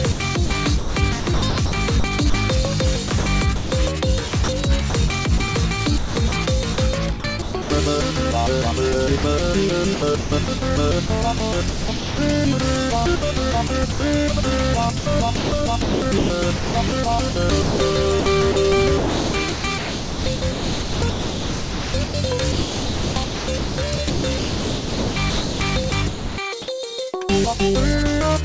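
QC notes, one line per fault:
0.12–2.34 s, 3.08–3.72 s, 4.28–5.40 s, 5.98–7.70 s, 9.94–12.18 s, 13.16–14.00 s and 14.00–26.38 s... correction, 15.00–26.38 s: sound chopped by the voice detector. Each stretch cuts in and out, with portions swapped for synthetic comfort noise: about 640 ms, 260 ms, 160 ms, 500 ms, 740 ms and 160 ms in the first six, and 6.2 s in the last. This is likely because the sender's voice detector kept toggling transmission as quieter sound fell below its threshold.
9.18–9.24 s: sound dropped by the voice detector. For 60 ms the sound disappears and steady comfort noise fills the gap until the sound returns. The detector likely took this quiet passage for background and stopped sending, so the receiver played generated noise in its place and that 60 ms of original sound is lost. The comfort noise, like everything carried over this call path, has nothing above 8 kHz, which points to a wideband codec such as G.722.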